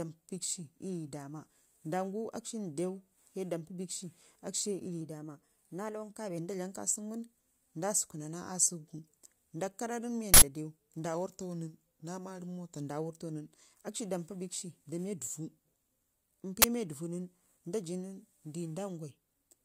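From 5.01 to 6.38 s the speech runs about 6% fast and roughly a semitone sharp (101 cents), then snaps back just before "nda dlam ka seunu". It is a drift correction step, likely from clock-matching software resampling in one jump to drain its buffer. The same fault recurs the other way from 11.14 to 12.89 s and from 15.18 to 16.13 s, starting just after "da miya", each about 6% slow and 108 cents flat as the buffer refills. Speed and pitch move together throughout.

At 10.34 to 10.42 s an 80 ms burst of digital noise cuts in. This is an uninitialised buffer: a block was sent to output before any audio was written into it, so stale memory contents played as samples. A shorter 20 ms burst of the same kind sits at 16.62 to 16.64 s, abrupt and harsh against the surrounding speech.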